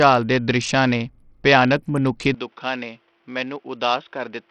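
A speech clip carrying heavy codec damage throughout, likely Bluetooth SBC compression at a low bitrate: the spectrogram stops dead at 10.8 kHz, with gritty, flickering treble below. From 2.35 s, right after "ਦ੍ਰਿਸ਼ਾਂ ਨੇ ਭਿਆਨਕ ਮਨੁੱਖੀ", the input likely switched to a poorer device: without any gap, the sound turns boxy, the spectrogram cuts off at 3.8 kHz, the waveform shrinks a few dB, and a faint new noise floor appears.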